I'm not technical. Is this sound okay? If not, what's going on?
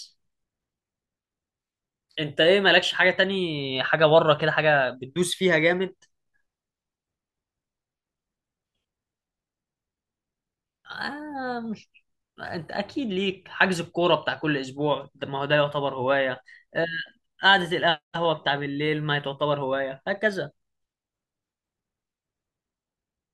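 Yes, it's fine; nothing in this recording is wrong.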